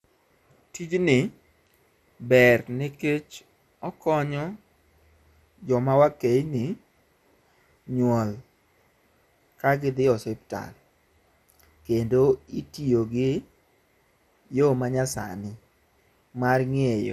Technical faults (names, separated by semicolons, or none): MP2 compression